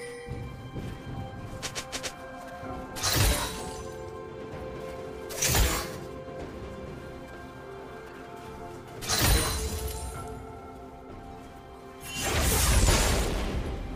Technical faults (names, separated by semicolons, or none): none